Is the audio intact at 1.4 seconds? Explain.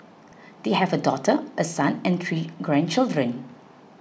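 Yes, the speech at 1.4 s is intact, with no dropout, click or other fault at that point.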